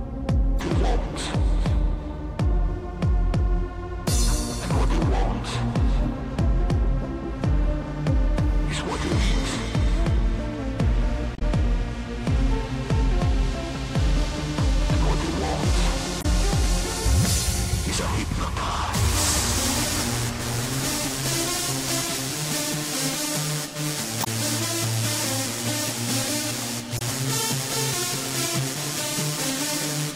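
Damaged data in a compressed stream disrupts the audio at 0.56–0.61, 11.35–11.42, 16.18–16.25, 24.20–24.27 and 26.95–27.01 s. Each time the decoder misreads corrupted frames and loses sync, leaving a brief burst of 40 to 70 ms.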